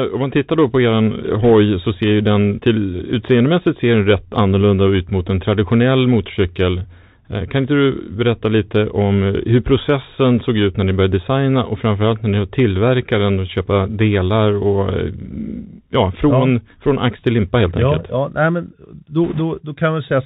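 The whole recording carries the Bluetooth CVSD headset codec. Its one-bit delta coding, consistent with a 64 kbps link, cuts everything above 4 kHz, leaves a grainy hiss beneath the speech, and makes sibilants scratchy where fast high-frequency energy outruns the adaptive step size.

Bit errors on the Bluetooth voice link appear as a brief crackle at 1.44 s, and as a longer rushing burst from 19.25 to 19.41 s. The error rate is roughly one percent in the first and about twice that in the second. Because every CVSD bit carries equal small weight and errors decay quickly, these sound like noisy roughness rather than sharp clicks.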